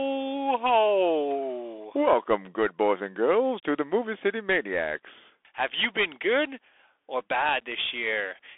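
From start to finish, the speech passes through a Bluetooth CVSD headset codec. The band is narrow, running from 300 Hz to 3.5 kHz. Nothing above 3.8 kHz gets through, so the sound is thin and muffled. The codec sends a single bit per sample, meaning only up or down, with a step size that adapts. Loud high sounds outrun that step and distort. S sounds turn scratchy, and a granular hiss lies under the speech. The damage fits a 64 kbps headset link and is plainly audible.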